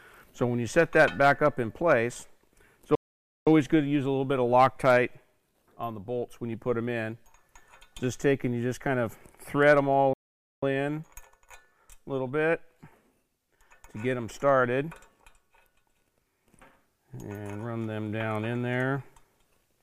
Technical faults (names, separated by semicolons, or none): playback stall